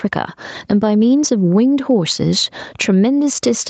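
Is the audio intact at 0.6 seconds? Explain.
No. At 0.6 s the gain pumping runs on through the whole clip: the level is pulled down on each loud sound, so loud and soft parts sit closer together and the sound is squashed. The likely cause is a fast limiter reacting to gain set far too high. It swings the level by roughly 10 dB. On a waveform the envelope looks squashed.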